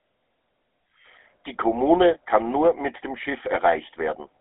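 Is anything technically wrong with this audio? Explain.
Yes. The whole clip carries GSM full-rate codec damage. The speech has a buzzy, gravelly roughness. The band runs from about 250 Hz to 3.7 kHz, and nothing sounds above 3.8 kHz. The coder models the vocal tract and drives it with coarsely sampled pulses. This fits the 13 kbps full-rate coder.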